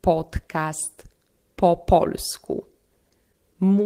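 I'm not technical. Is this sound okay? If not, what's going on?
No. Between 3.09 and 3.75 s there are scattered short gaps: about four tiny pieces of the sound, each roughly 10 ms long, went missing in transmission. The player filled each hole by stretching the preceding sound, leaving brief ticks or hiccups.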